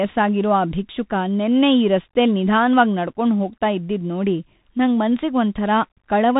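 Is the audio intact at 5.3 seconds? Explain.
No. The Bluetooth CVSD headset codec degrades the speech at 5.3 seconds and throughout the clip. CVSD sends a single up-or-down bit per sample and adapts its step size as it tracks the waveform. The plainly audible damage fits a 64 kbps CVSD link. Nothing above about 3.8 kHz survives, so the sound is narrowband and muffled. Loud high-frequency energy outruns the step size and distorts, s sounds come out scratchy, and a granular hiss sits beneath the speech.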